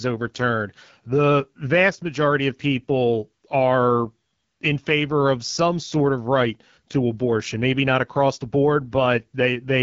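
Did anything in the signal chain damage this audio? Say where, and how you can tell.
Yes. The damage happens at the codec stage: the speech passed through the AMR wideband (HD Voice) codec at a low rate, probably around 8.85 kbit/s. Throughout, the voice sounds rough and raspy, with a hissy, noise-like top and nothing above 7.5 kHz.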